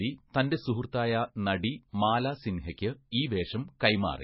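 Throughout the speech, nothing sounds above 5.6 kHz, and the sound is watery and swirling. Attacks smear, and sibilants chirp metallically. This is likely heavy MP3 compression at a very low bitrate, near 19 kbps. Starved of bits, the encoder drops the treble and lets weak components flicker between frames.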